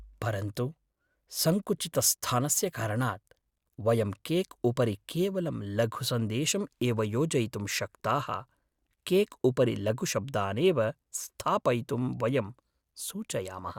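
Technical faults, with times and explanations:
No technical faults can be heard in this speech recording.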